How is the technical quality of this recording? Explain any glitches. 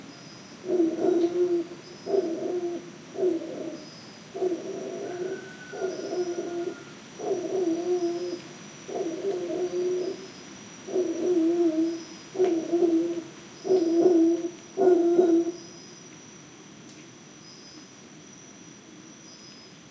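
No glitches can be heard anywhere in the recording. The sounds come through steady and unbroken, with nothing that points to a technical problem.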